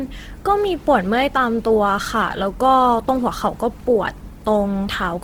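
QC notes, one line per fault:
Throughout, Opus compression: the speech sounds grainy and rough, likely a low bitrate around 16 kbps in CELT mode filling starved bands with folded or noisy content.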